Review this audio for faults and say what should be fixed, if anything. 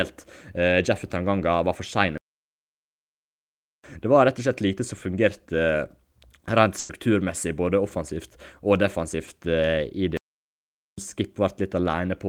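The speech goes silent from 2.18 to 3.84 s, 1.66 s, and again from 10.17 to 10.98 s, 0.81 s. This is a playback stall, likely from the player running out of data or its thread being blocked. Larger playback buffering and a higher-priority audio thread would prevent it.

A burst of packet loss occurs from 6.79 to 6.91 s. About 100 ms never arrived in time. The receiver extended the last sound and faded it, so there is no silence. That stretch of speech is simply missing. Forward error correction or a deeper jitter buffer would reduce this.

Short concealed packet loss appears at 9.25 to 9.29 s. About 20 ms was lost. The decoder patched it by continuing the preceding sound and blending back, which leaves a brief smear. Redundant packets or a slightly larger jitter buffer would help.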